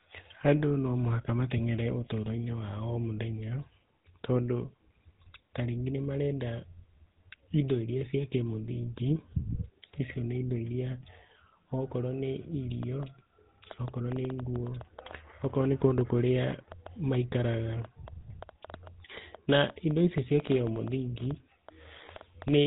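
Speech with a buzzy, gravelly roughness and nothing above 3.9 kHz throughout, the plainly audible damage of the GSM full-rate codec, whose coarse pulse-driven excitation suggests roughly 13 kbps.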